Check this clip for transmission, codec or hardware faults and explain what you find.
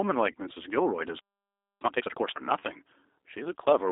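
Four kinds of fault are present: G.729 codec coding throughout, two packet-loss concealment events, a playback stall, and a sped-up catch-up after it.

Throughout the clip, the speech carries plainly audible G.729 codec damage at 8 kbit/s. The codec rebuilds each frame from a vocal tract filter, a pitch predictor and a few pulses, so the voice sounds rough and synthetic. The line band spans 300 Hz to 3.7 kHz, so it sounds thin and boxy.

At 0.32 s and again from 2.60 to 2.64 s, VoIP packet loss concealed by the speech codec shows up. Each gap is about 20 ms, which fits two lost 10 ms frames. The decoder extends its last pitch and filter at falling gain, giving a brief fading buzzy or noisy stretch, and the sound stays weak or distorted as the following frames rebuild.

From 1.19 to 1.81 s a playback stall cuts the sound off mid-flow for about 0.61 s. The output is silent until playback resumes. 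The likely cause is the player running out of buffered data or its output thread being blocked.

From 1.81 to 2.41 s, time-compressed catch-up plays the backlog at 2.0 times speed. Small segments are cut out and cross-faded, so the speech sounds hurried at normal pitch.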